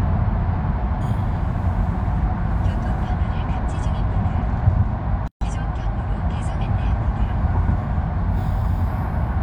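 A gap at a join of encoded pieces runs from 5.28 to 5.41 s: about 136 ms of silence where separately encoded pieces were butted together without trimming each encoder's start-up delay and final-frame padding. The sound drops out abruptly, edges smeared, then resumes exactly where it stopped.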